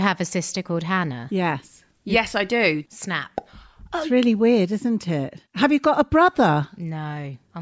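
No technical faults can be heard anywhere in the recording; the signal stays continuous and steady throughout.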